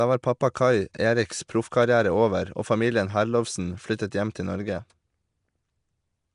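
From the first moment the speech has a rough, hissy halo and a smeared, underwater feel, and nothing comes through above about 10.6 kHz. That points to Nellymoser compression, likely the old Flash microphone codec at a rate that fits around 44 kbps. It codes short blocks with a fixed, small bit budget, so weak bands get no bits and are filled with noise, which gives that grainy wash. The damage is plainly audible throughout.

Right after "var pappa", at 0.54 s, there's pre-echo: a short hiss arrives about 10 ms before a sharp onset, and the attack itself sounds softened. The same thing happens again at 0.94 s, also spread over about 10 ms. In both cases the codec has spread quantisation noise evenly across a block, so noise sized for the loud attack also fills the quiet moment just before it.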